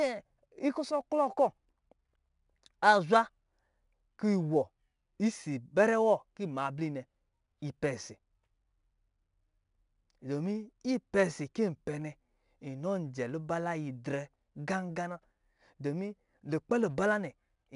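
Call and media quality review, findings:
4-bit ADPCM compression, whole clip: plainly audible gritty hiss tracking the speech level, crunchy on sharp consonants where the step size can't keep up. Nothing above 10.6 kHz, so a bit dull. Fits an 89 kbps ADPCM encode.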